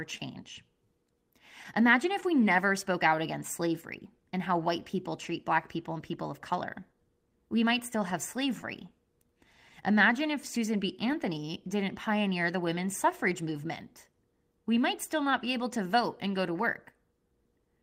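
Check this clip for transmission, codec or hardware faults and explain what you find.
Yes, there are transmission faults. The speech carries clock drift, two stretches of scattered short gaps, and a steady run of timing corrections.

Clock drift between sender and receiver runs through the whole clip. The sender's clock is slow, by roughly 2%. Audio arrives a little slower than the receiver plays it. The jitter buffer keeps draining and must be topped up. This causes small timing hiccups at uneven intervals from start to finish. They come from no single event. The drift keeps producing them.

Scattered short gaps appear first between 0.17 and 2.24 s. There are about three, the longest around 15 ms, and roughly 30 ms is patched in all. They return between 4.29 and 17.00 s. There are about fifteen there, none longer than about 10 ms, and around 100 ms is filled in total. Each lost or late packet was covered by extending the last sound. 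Nothing drops out. You hear brief ticks or slight smears.

Repeated timing corrections run from 0.85 to 17.29 s. The receiver keeps repeating short pieces to make up for the slow sender. Every edit goes the same way, stretching the audio. The effective speed is 99%, and about 200 ms is added over the stretch. The edits are small and unevenly spaced. They come across as faint hiccups and a slightly unsteady, dragging tempo.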